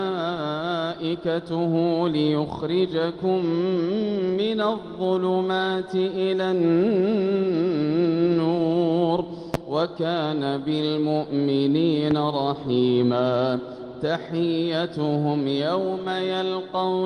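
Two loud pops land on the audio, one at 9.54 to 9.57 s and another at 12.11 to 12.14 s, each a single sharp crack sitting roughly 15 dB above the material, which carries on underneath. They're likely voltage spikes from a switch, plug or static discharge getting into the chain.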